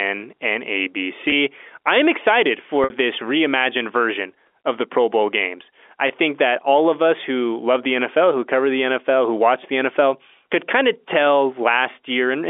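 Speech on a G.711 telephone line (band about 300 Hz to 3.5 kHz), with packet loss with pitch repetition: a brief buzzy hold at 1.30–1.32 s just before "I am excited", a fade into silence at 2.84–2.90 s right after it, and a brief buzzy hold at 6.08–6.10 s after "games I". Each time, the receiver looped the last pitch period to bridge gaps of 20, 60 and 20 ms.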